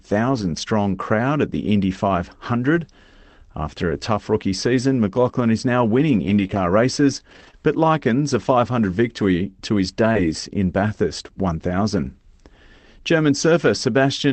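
From 0.33 to 0.43 s, just before "strong crowd at the", there is a lost packet rebuilt from error correction. The stretch sounds like about three separate packets went missing. The decoder filled the hole with the low-bitrate redundant copies carried in the following packets, so the sound does not drop out. Instead, about 60 ms comes through rougher and noisier than its surroundings. The same thing happens once more at 2.75 to 2.77 s, a single 20 ms frame that briefly turns grainy.

Between 6.27 and 10.17 s, after "is now winning", scattered short gaps appear: roughly three small holes, none much longer than 20 ms. The receiver patched each one by extending the preceding sound, and those patches amount to only about 1% of the span. The result is a few brief ticks or momentary smears while the audio stays clear. All of this sits on an Opus call path whose audio extends to 8 kHz, with coding noise consistent with a bitrate of around 24 kbps.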